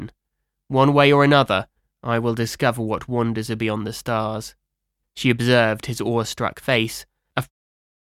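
There are no technical faults to describe; the sound simply fades out smoothly at the end, from about 7.5 s to 7.52 s.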